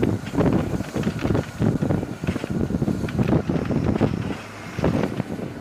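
A gap between stream segments falls at 1.23 s and again at 3.24 s, two seconds apart, which fits 2-second segments. At each boundary the timestamps of neighbouring segments don't quite meet, so the player inserts silence: about 8 ms at the first and about 10 ms at the second. Each is heard as a brief hard-edged dropout in the sound. The audio is delayed slightly rather than lost.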